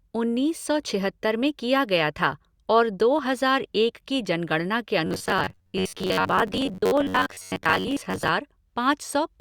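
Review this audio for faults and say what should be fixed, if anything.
From 5.07 to 8.29 s, new audio likely arrived too seldom, so playback repeated a buffer of about 11 ms and skipped roughly half the real sound. The result is robotic sound from repeated short buffers, a rigid metallic buzz at 93.8 Hz that only loosely tracks the speech. A larger jitter buffer and higher audio-thread priority would keep data arriving on time.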